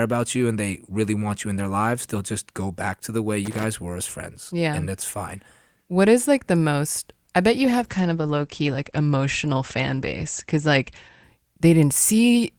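Speech, with two problems. From 3.45 to 3.64 s there's a loose connector crackle, a short scratchy burst where a worn contact kept making and breaking the signal. Then from 7.58 to 11.29 s you get a call bitrate drop: the top end falls from 20 kHz to about 8 kHz and the voice turns coarse and muffled, bottoming out for roughly 3.5 s. That fits the encoder dropping from around 32 to 12 kbps.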